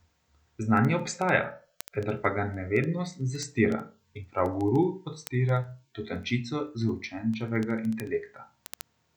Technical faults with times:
0.11-9.10 word clock ticks

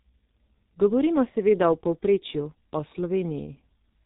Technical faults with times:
0.00-4.06 G.723.1 codec

